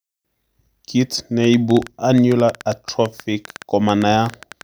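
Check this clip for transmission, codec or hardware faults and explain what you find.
One fault stands out: a train of clicks running from 1.44 s to 4.62 s. Around thirty short pulses of much the same shape arrive at an uneven pace averaging 8.5 per second, the loudest peaking roughly 10 dB above the speech. They tick audibly over the talking and through the pauses alike. The likely cause is interference from nearby equipment or a faulty connection or power supply. Their matching shape and steady density separate them from random crackle or a lone pop.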